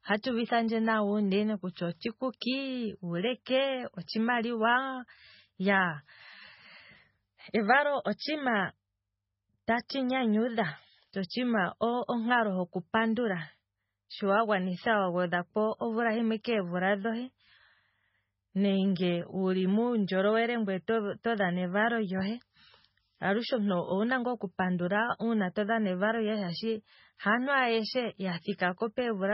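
Throughout the speech, a starved MP3 encoder is the likely cause, consistent with a very low bitrate near 16 kbps: it cuts everything above 5.6 kHz and drops weak frequency lines frame to frame, leaving heavy MP3 compression damage, dull and watery, with chirpy, smeared consonants.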